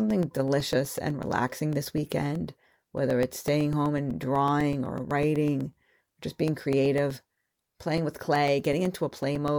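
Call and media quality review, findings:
Periodic USB or driver dropouts, 0.10 s to 9.48 s: a recurring host-side stall starves the audio path every 0.125 s. Each stall leaves a gap of roughly 2 ms of silence, around seventy in all, heard as a steady tick pattern through the speech.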